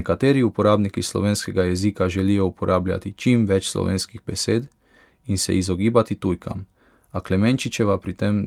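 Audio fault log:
No technical fault can be heard anywhere in the speech signal.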